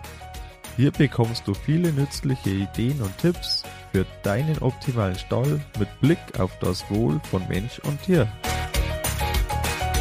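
No technical faults can be heard anywhere in the audio.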